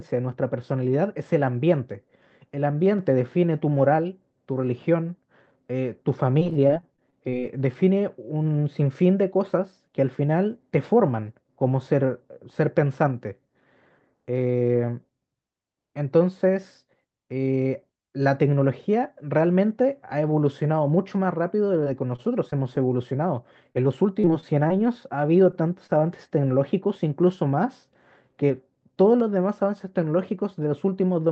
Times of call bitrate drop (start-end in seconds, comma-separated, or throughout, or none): none